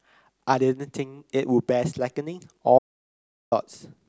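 At 2.79 s the speech cuts off abruptly. What follows is an audio dropout to silence lasting about 0.73 s, until 3.52 s. The gap is silent, with no room tone or background noise underneath. The speech then resumes mid-flow, as if nothing had paused. The likely cause is a brief loss of the input signal, with the recorder writing silence until the signal returned. Whatever was said during that stretch is lost.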